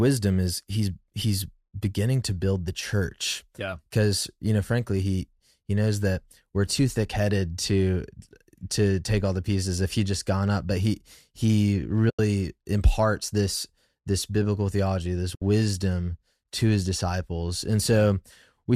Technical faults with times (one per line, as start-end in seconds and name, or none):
12.10-12.19 AAC frame loss with muting
15.35-15.42 AAC frame loss with muting